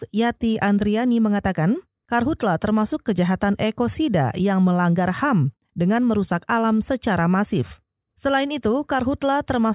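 No technical fault can be heard anywhere in the recording. Nothing in the speech stands out as a problem at any point.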